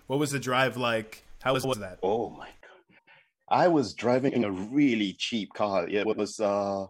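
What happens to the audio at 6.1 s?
Right after "a really cheap car", from about 6.05 to 6.20 s, the speech breaks into a brief garbled flutter. These are frames out of order: two adjacent blocks of roughly 70 ms each were decoded swapped, so that stretch plays with its halves exchanged. No time is lost.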